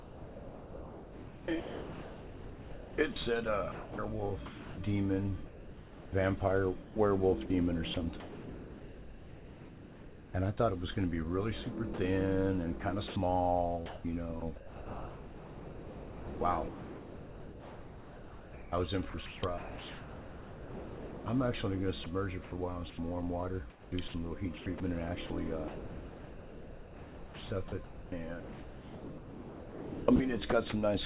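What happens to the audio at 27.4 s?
At 27.4 s the sound is choppy; this runs from 13.08 to 30.72 s. It's likely sound chopped by the voice detector, which kept gating transmission and filled roughly 10.5 s with comfort noise.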